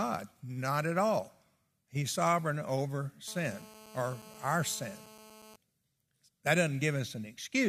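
From 3.28 s to 5.56 s the speech picks up a GSM phone buzz: a hard, raspy tone at about 217 Hz, packed with harmonics and unrelated to the speech itself. A 2G handset nearby was on a call, sending radio bursts 217 times a second, and some part of the audio circuit rectified those pulses into sound. Since it's a call, the buzz holds nearly steady through its stretch, sitting about 21 dB below the speech.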